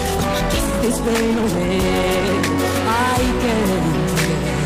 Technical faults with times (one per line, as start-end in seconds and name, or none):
0.00-2.94 time-stretched section